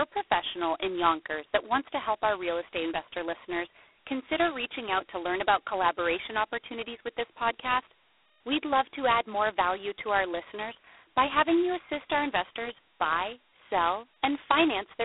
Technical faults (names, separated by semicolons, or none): G.726 ADPCM